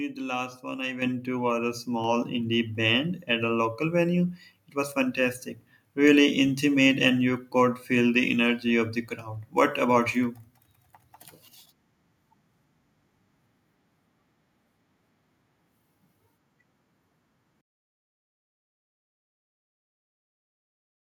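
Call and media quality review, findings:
Microphone volume stepped up at 1.02 s, right after "the last one I". Voice and room noise jump together by about 8 dB. Likely the call app's auto-gain bumping the device input level in one hit.

Microphone volume stepped up again at 2.04 s, just before "indie band at a". It's a smaller step of about 3 dB, with everything rising at once. Same auto-gain behaviour kicking the input level a second time.

Truncation distortion on a fade from 17.61 s to the end. The fade-out starting around seventeen and a half seconds has a tail that goes gritty. It's worst from 18.26 s to 21.19 s. The fade or volume stage is rounding to too few bits with no dither, which fits a 9-bit word length, so quiet samples collapse into coarse square steps.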